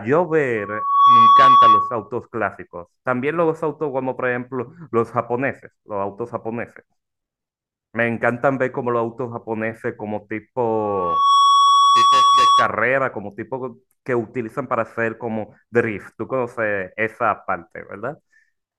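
Loudspeaker feedback squeal rises at 0.57–2.10 s and again at 10.66–12.82 s. The microphone re-amplifies its own loudspeaker, and a 1.1 kHz tone swells over roughly half a second the first time and about 0.7 s the second to well above the speech. A spectrogram shows one bright horizontal line at 1.1 kHz.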